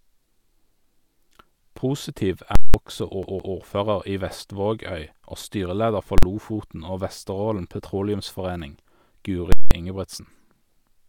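At 2.55 to 2.74 s, a calculation yields invalid numbers at full scale, pinning the output to one extreme value for 186 ms, which fits an 8192-sample block. It is heard as a loud pop, silence, then another pop. From 3.23 to 3.56 s the audio behaves like a CD stuck on one turn, jumping back to replay the same 164 ms twice, with brief mutes at each jump. At 6.18 to 6.23 s a 46 ms full-scale block, consistent with 2048 samples, collapses into a single bang. At 9.52 to 9.71 s another 186 ms block repeats the double pop around silence.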